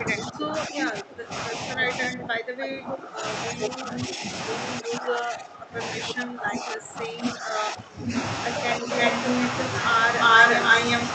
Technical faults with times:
0.00-4.23 speech suppressed in double talk
0.82-0.88 echo leak
3.63-3.98 echo leak
4.80-5.80 speech suppressed in double talk
6.12-8.13 speech suppressed in double talk
8.79-8.89 speech suppressed in double talk
8.85-9.70 echo leak
10.20-11.05 echo leak

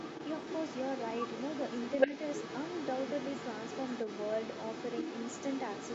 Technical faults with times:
0.00-5.94 other side's voice leaking through

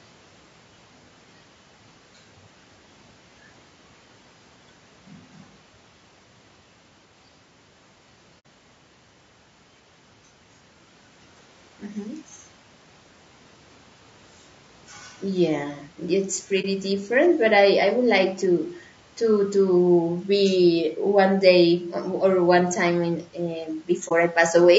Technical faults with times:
0.00-24.78 low-delay AAC compression
8.39-8.46 AAC frame loss with muting
16.61-16.65 AAC frame loss with muting
24.07-24.12 AAC frame loss with muting

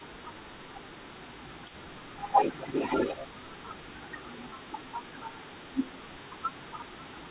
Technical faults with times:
0.00-0.42 speech suppressed in double talk
0.00-7.31 echo leak
0.93-1.85 speech suppressed in double talk
2.55-2.61 speech suppressed in double talk
3.26-6.74 speech suppressed in double talk

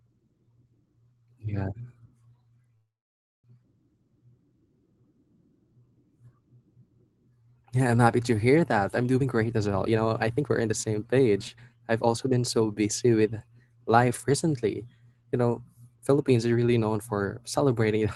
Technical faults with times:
2.75-3.47 call audio freeze
9.20-12.18 jitter buffer speed-up

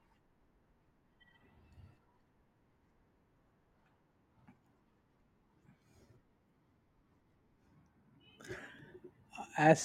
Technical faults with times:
3.86 dropped buffer (overrun)
8.79 dropped buffer (overrun)

